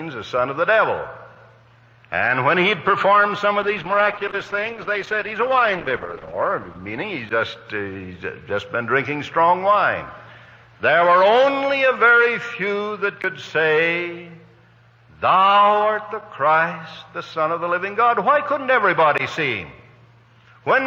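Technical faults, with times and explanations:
Throughout: gain pumping. The input gain was most likely set far too high for the microphone, so a fast limiter or compressor keeps pulling the level down whenever something loud arrives and lets it rise again afterwards. The level swings by roughly 5 dB. Loud and quiet passages end up pressed close together, and the whole sound feels squashed and breathing.
3.63 to 8.93 s: call bitrate drop. The call's bandwidth estimate collapsed, and the encoder was pushed to spend far fewer bits. The sound fits a fall from about 128 kbps to about 12 kbps. The coding becomes coarse, and the top end is cut away, so the audio turns muffled, rough and watery. It stays at its worst for about 2.7 s before the bitrate climbs back and clarity returns.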